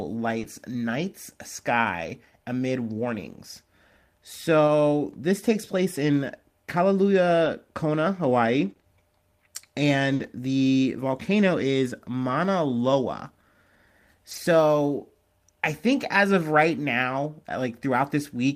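From 0.39 to 10.25 s, just before "the volcano is", the speech has scattered short gaps. About five packets arrived late or never arrived, spread thinly across the stretch. The receiver filled each hole by extending the sound that came before it. In total, 140 ms went missing and 200 ms were patched. No single gap is longer than about 40 ms. They show up as brief ticks, small smears and tiny hiccups in otherwise continuous speech.

At 14.31 to 14.37 s, a lost packet was rebuilt from error correction. The evidence points to two lost packets. Each was recovered from a low-bitrate copy carried inside the packet that followed it. The decoder played those copies, so there is no silence. The 40 ms it rebuilt sound rougher and noisier than the speech around them, a brief grainy patch rather than a dropout.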